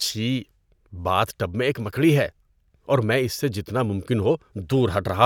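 Nothing stood out on listening to this speech recording.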